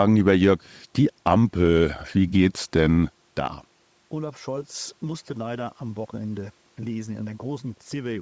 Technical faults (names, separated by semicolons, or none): none